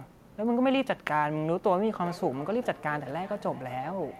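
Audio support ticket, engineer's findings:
Speech returning as thin, ringing repeats roughly every 0.4 s, from 2.01 s to end of clip, peaking about 17 dB below the speech. Feedback echo between two devices: a second device in the room replays this microphone's signal, which is re-captured. The local echo canceller ignores audio it did not play, so the loop repeats.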